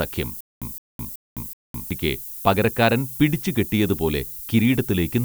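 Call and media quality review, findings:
Low bit depth with noise shaping, throughout: steady thin hiss climbing toward the top of the band, roughly 15 dB under the speech. Consistent with 7-bit quantisation, with rounding error shaped upward.

Stutter with silent gaps, 0.41–1.91 s: a 164 ms fragment repeats four times with 211 ms of digital silence between, a 375 ms cycle. Likely a stalled stream replaying its last buffer. Missing audio is lost before "പകരക്കാരൻ പിടിച്ചു കെട്ടിയതുപോലെ".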